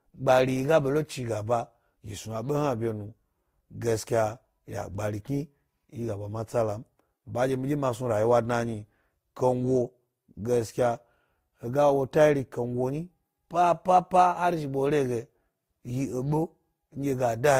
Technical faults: transcoding between lossy codecs

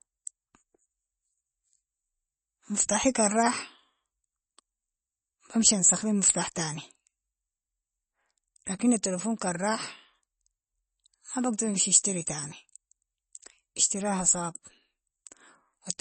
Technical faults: MP3 compression

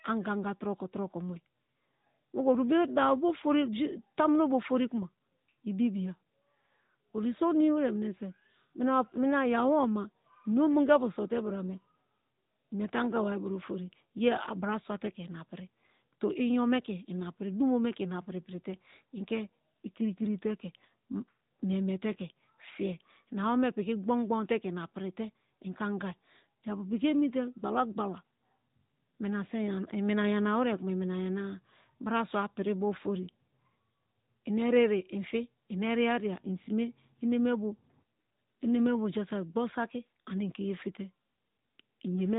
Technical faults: AMR narrowband mobile codec

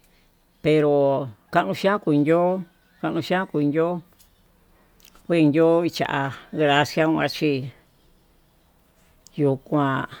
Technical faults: none

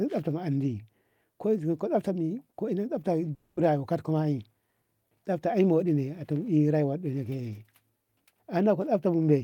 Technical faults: long network dropout; jitter buffer speed-up

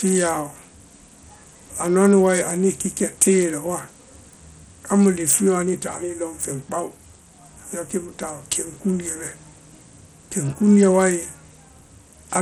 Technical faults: Bluetooth SBC compression

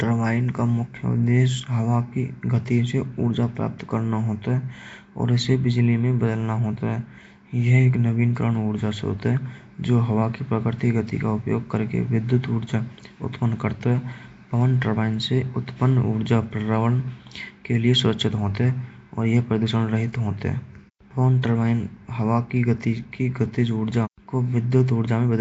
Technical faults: Nellymoser compression

